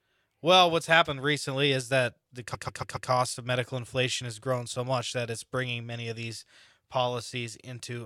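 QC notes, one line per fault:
2.53–3.09 s, repeated frames: the same 139 ms slice of speech plays four extra times in a row, heard as a stutter. The block length suggests a run of six compressed frames written out again, adding 557 ms to the clip. Unlike a dropout or concealed packet loss, nothing is missing or smeared; identical audio simply recurs, and the rest of the speech arrives later by that amount.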